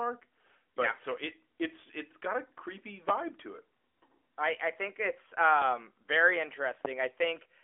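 Speech heard through a narrowband phone-style channel, with nothing above about 3.5 kHz, is interrupted by two loud pops, at 3.09–3.12 s and 6.85–6.88 s, peaking roughly 20 dB and 15 dB above the voice. Unlike dropouts, the speech continues underneath each thump, which points to a likely voltage pulse from a switch or static.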